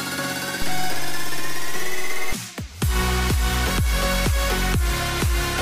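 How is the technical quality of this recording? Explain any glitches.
A DC step at 0.62 s is the one glitch in this recording. The zero line of the waveform suddenly shifts by about -16 dBFS, as happens when a converter recalibrates or an input carrying a standing offset gets switched into the path. The offset holds until 2.33 s and then drops back to zero. Each jump is heard as a low thump, one at 0.62 s and another at 2.33 s, while the sound itself carries on unchanged between them.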